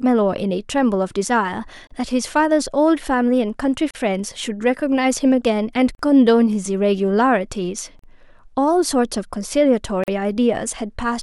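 A gap at a join of encoded pieces opens at 1.87 s (35 ms), then 3.91, 5.95, 7.99 and 10.04 s (43 ms each). The steady 2 s spacing and speech resuming exactly where it stopped point to untrimmed encoder delay and padding, not random dropouts.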